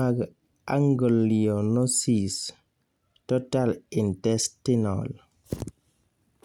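No technical faults can be heard anywhere in the recording.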